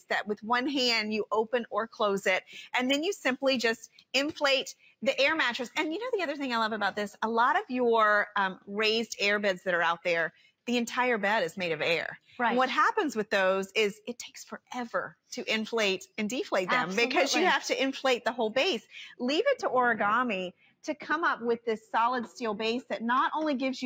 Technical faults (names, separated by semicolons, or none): noise suppressor applied to music or sounds; sound cut by the noise suppressor; de-emphasis applied wrongly